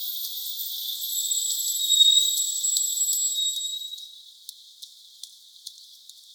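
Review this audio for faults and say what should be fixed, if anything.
Nothing here needs fixing; I didn't hear any faults in this audio, so it can stay as it is.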